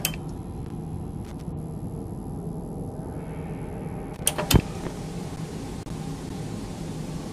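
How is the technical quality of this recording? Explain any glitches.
The recording has two short glitches, both loose connector crackle, at 1.25 to 1.41 s and 4.14 to 4.25 s. A worn or dirty contact rapidly makes and breaks, chopping the signal into an irregular scratchy burst. The uneven, gritty texture separates it from the clean, sudden gaps of digital dropouts.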